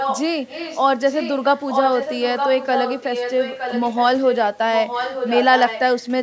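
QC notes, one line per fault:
0–0.26, 0.47–0.81, 1.09–4.05, 4.23–4.36 and 4.73–6.06 s: echo leak. A fainter copy of the speech trails it by 914 ms, about 5 to 15 dB down, likely loudspeaker pickup the echo canceller missed. Spectrogram shows repeated formant patterns shifted right; waveform envelopes overlap and smear.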